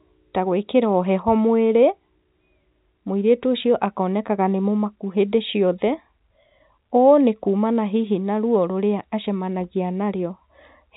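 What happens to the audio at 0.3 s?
Nothing goes wrong at 0.3 s; the speech there passes intact through its G.711 telephone band, with nothing above about 3.8 kHz.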